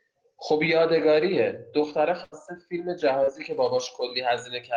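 At 2.23 s the speech breaks in a burst of packet loss lasting until 2.35 s. About 80 ms of audio never arrived, and the receiver covered the hole by stretching the last sound and letting it fade, so a held buzz or thinning hiss sits where speech should be. Unlike a plain dropout there is no silence, and unlike a short concealed loss the patch is long enough to hear as a sustained, decaying tone before speech resumes further along.

At 3.24 s to 3.30 s comes a short concealed packet loss, roughly 40 ms missing and filled. The decoder continued the preceding sound from its pitch or as shaped noise, then crossfaded back, leaving a brief smear or slight wobble rather than a held tone. Its brevity sets it apart from the earlier burst: there is no audible fade, only a momentary blur where a small piece of speech may slip away.

From 3.53 s to the end, pre-emphasis is left on. The treble was boosted along a curve matching FM's 75 µs characteristic, and the complementary de-emphasis was never applied, leaving highs about 13 dB up at 10 kHz relative to 1 kHz. 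The speech turns thin, bright and hissy on sibilants. Because the lift rises steadily with frequency rather than peaking in one band, it reads as a tilted spectrum, not a resonant presence boost.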